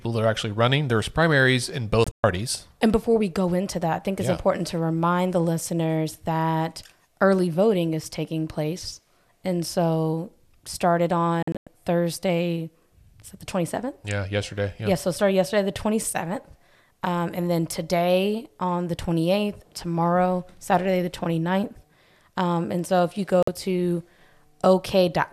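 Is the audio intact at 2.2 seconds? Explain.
No. A digital broadcast dropout hits 2.04 to 2.24 s: the receiver lost frames and muted, leaving short silent holes, the longest 120 ms.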